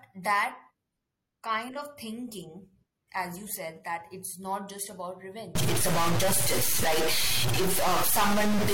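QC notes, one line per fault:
5.55 to 8.74 s, stuck bit: right after "it's not just about" the speech picks up distortion and stays that way to the end. It sounds like one data bit is locked, likely from a broken data line or converter, so roughly half the samples are shoved off by that bit's weight in a pattern that follows the waveform. Quiet stretches in there fill with a noise floor instead of going silent.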